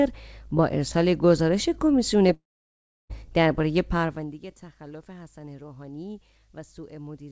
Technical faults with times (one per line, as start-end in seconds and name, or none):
2.34-3.11 long network dropout